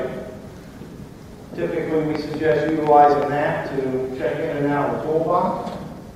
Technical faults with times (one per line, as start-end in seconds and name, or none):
2.15-3.23 train of clicks